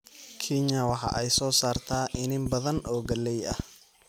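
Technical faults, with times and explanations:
0.89 to 3.61 s, train of clicks: uneven ticking pops sit over the speech and carry on through the pauses, around fifteen of them at about 5.55 per second and peaking about 10 dB above it, likely interference or a faulty connection injecting repeated pulses.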